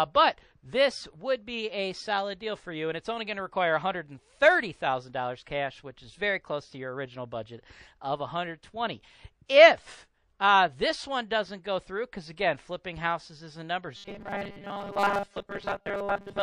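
MP3 compression runs through the whole clip, with plainly audible codec damage that fits a low bitrate of around 40 kbps, likely the cause. At that rate the encoder lacks the bits to code everything, so it drops faint frequency components. Those components appear and vanish from one frame to the next, which gives the sound a watery, swirling quality. Sharp onsets also lose their edges.

Pre-echo appears from 9.46 to 9.49 s. A hiss, about 13 dB above the surrounding noise floor, spreads across 28 ms before a sharp attack. The encoder never switched to short blocks, so it handled the attack inside a 52 ms transform window. Quantisation noise sized for the loud onset spread evenly across that window and filled the quiet moment before it. The hit sounds blunted, and a brief whispery smear leads into it.

Robotic sound from repeated short buffers begins at 13.97 s and lasts to the end of the clip at 16.43 s. 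A rigid, metallic buzz fixed at 200 Hz sits over the sound. That frequency fits the playback repeating a 5 ms fragment whenever fresh audio arrived too late, which is likely what happened. Roughly 70 percent of the audio here is repeated material rather than new signal. The original content is skipped, and only its broad shape comes through the buzz.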